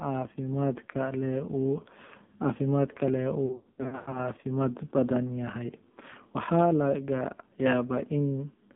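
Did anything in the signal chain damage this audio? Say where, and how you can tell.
Yes, at the codec stage. The whole clip has passed through the AMR narrowband mobile codec, and heavily. The speech sits in a 150 Hz to 3.6 kHz band with nothing above, and it has a buzzy, synthetic quality. That fits a low AMR-NB mode around 5.9 kbps. At that rate the vocal tract model is excited by very few pulses per subframe, so voicing turns coarse and artificial.

The network stage adds lost AMR speech frames between 3.46 and 4.30 s. Radio errors caused frames to fail their checks, about 440 ms in total scattered over 680 ms, with the longest unbroken run 100 ms. The decoder patched each gap by repeating the last good pitch and vocal tract settings at falling gain. The result is a stretch of warbling and smeared speech, dipping toward silence in the longer runs and coming back rough.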